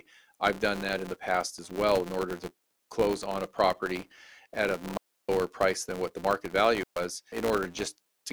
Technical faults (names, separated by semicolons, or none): filter restarted on every block; digital wireless dropout